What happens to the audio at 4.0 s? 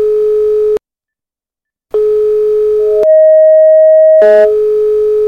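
At 4.0 s a loudspeaker feedback squeal is sounding, from 2.79 to 4.57 s: a 630 Hz tone, looped back through the microphone, swells over a fraction of a second to a few dB above the sound, unlike a steady hum.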